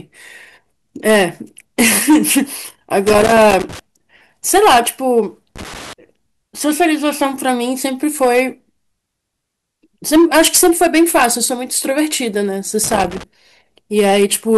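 From the first second to the last, the speech carries hard clipping. The signal was pushed about 10 dB past what a stage in the chain could pass, so a few percent of samples, the loudest peaks, are sliced flat. Those squared tops add harmonics high into the spectrum, giving a harsh fuzz on every stressed syllable. On a waveform the peaks sit pinned against a flat ceiling. On a spectrogram each loud moment smears into broadband energy reaching well above the normal speech band.

Loose connector crackle breaks in three times: from 3.07 to 3.79 s, from 5.56 to 5.93 s, and from 12.84 to 13.23 s. A worn or dirty contact is rapidly making and losing connection, chopping the signal, and any DC on the line adds pops. Each burst sounds like irregular scratching laid over the clipped speech. On a waveform it shows as a ragged cluster of sudden spikes and dropouts. On a spectrogram it appears as dense, uneven vertical streaks across all frequencies, confined to those three windows.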